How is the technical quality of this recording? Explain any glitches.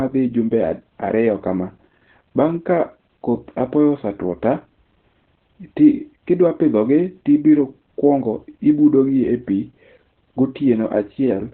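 The quality's pretty rough. The whole clip has heavy Opus voice compression, and nothing survives above about 4.3 kHz. That narrowband cutoff is why the speech sounds muffled, like an old phone line. At this end of its range, Opus's SILK coder predicts the voice's shape and codes the buzz underneath very coarsely. That coarse coding gives the hoarse, slightly robotic edge you hear. The damage fits an 8 kbps stream.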